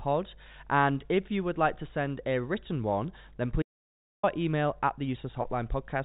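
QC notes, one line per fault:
3.62–4.23 s, audio dropout to silence: right after "a written one then" the speech cuts off into about 0.61 s of dead digital silence with no room tone at all, then resumes on "email at the". This likely comes from the input being lost while zeros kept being written, so that stretch is gone for good.
5.42–5.44 s, packet loss with pitch repetition: shortly after "email at the" the speech holds for an instant on a faintly buzzy, frozen tone within the narrow telephone band. One 20 ms packet went missing and the receiver filled it by repeating the last pitch period, a gap too brief to fade toward silence.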